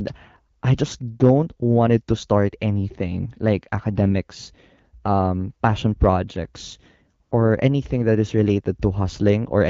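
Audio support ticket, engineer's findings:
AMR comfort noise at 0.59–0.61 s (20 ms) and 7.23–7.31 s (80 ms). Sender's voice activity detection judged silence and dropped speech frames. Receiver substituted smooth synthetic noise for the real background. Wideband speech clarity around it fits roughly 12.65 kbit/s AMR-WB.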